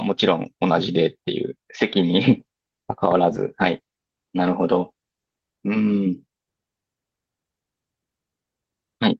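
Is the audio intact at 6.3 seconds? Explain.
Yes, the speech at 6.3 seconds is intact, with no audible dropout, click, distortion or other technical fault at that moment.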